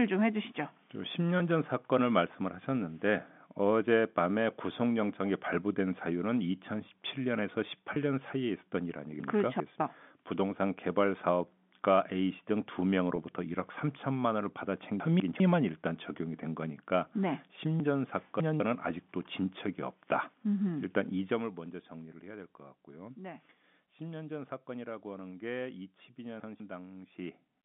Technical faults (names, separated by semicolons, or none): packet loss with pitch repetition; chunks out of order; zipper noise